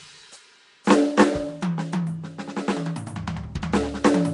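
From start to finish the music carries plainly audible codec damage, likely Nellymoser compression, fitting a rate around 44 kbps. That Flash-era codec spends a fixed bit budget on short blocks and fills starved bands with noise, leaving a rough, hissy, smeared coating.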